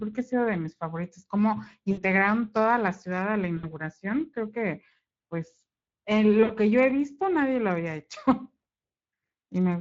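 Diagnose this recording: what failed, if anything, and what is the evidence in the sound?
Codec stage: the whole speech clip has plainly audible Speex codec damage, a hoarse, noisy CELP texture that fits a bitrate around 20 kbps.

Network stage: VoIP packet loss concealed by the speech codec at 1.91–2.03, 3.57–3.65 and 6.43–6.57 s, each about 60 ms of fading extrapolation.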